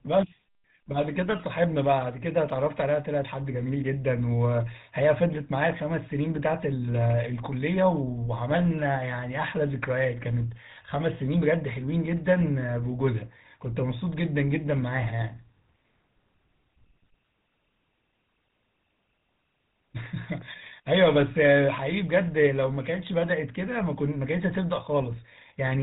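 GSM full-rate codec damage runs throughout the speech: a vocal-tract model excited by sparse regular pulses, bandlimited to 4 kHz, leaves a plainly buzzy, gravelly roughness consistent with 13 kbps coding.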